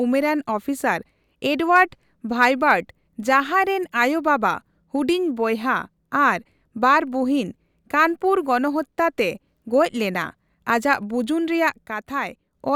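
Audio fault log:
11.86–12.54 s, sudden gain jump: the speech and its background noise drop together by about 6 dB from one sample to the next and later return just as abruptly. The likely cause is a gain change applied without a ramp, so the level steps instead of gliding.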